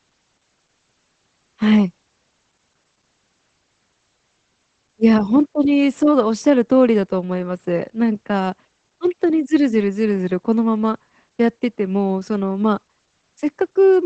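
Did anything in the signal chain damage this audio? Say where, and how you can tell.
Yes, at the codec: Opus voice compression throughout, nothing above about 8.5 kHz, plus a muffled, hoarse SILK coarseness that fits a low bitrate around 12 kbps.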